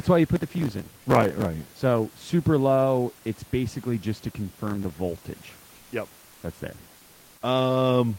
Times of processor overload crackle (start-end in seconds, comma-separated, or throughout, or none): 0.36-1.45, 4.68-4.90